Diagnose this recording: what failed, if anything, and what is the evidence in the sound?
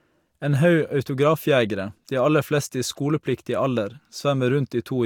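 Nothing failed: no stage between capture and playback leaves an audible mark anywhere in the speech.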